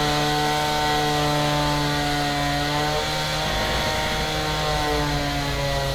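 Nothing in this recording of everyday sounds stood out as a technical fault on listening.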